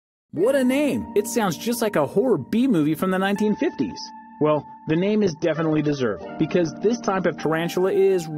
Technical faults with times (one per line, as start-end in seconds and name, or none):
3.43-7.43 adaptive stream at a lower bitrate